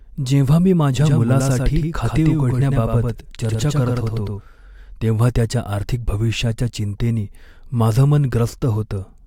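A speech clip in which the same signal is likely being picked up a second time through a slower path, producing a doubled audio track from 1.01 to 4.41 s, starting right after "जेव्हा मी". A clean, full-band copy trails about a tenth of a second behind, roughly 5 dB quieter, with no room colour. It switches on and off abruptly, giving a hard slapback echo.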